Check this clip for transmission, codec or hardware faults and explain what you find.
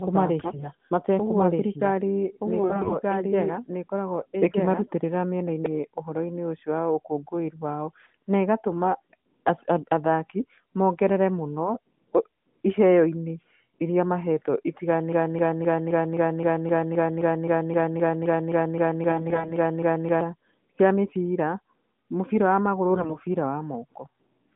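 Three kinds of fault affect this narrowband speech recording: a doubled track, AMR bit errors and a broken-record loop.

Doubled audio track, from the start to 5.66 s: a second, equally loud copy trails about one and a half seconds behind, likely from a slower duplicate capture path.

AMR bit errors at 0.40–0.69 s, 2.60–2.95 s, 19.10–19.53 s and 22.90–23.17 s: corrupted, weakly protected frame bits misplace excitation pulses, turning the voice briefly hoarse, scratchy and gargly.

Broken-record loop, 15.13–20.21 s: a 261 ms fragment repeats back to back nineteen times, likely a stalled stream resending its last buffer, while the intended audio is lost.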